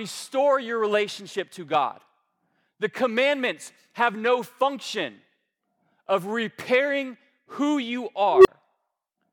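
An unstable filter appears from 8.31 to 8.48 s near the end of the speech: a recursive filter's feedback runs away, so a tone of around 400 Hz swells over about 0.14 s into a loud, clipped squeal, then cuts to roughly 29 ms of silence as the filter resets.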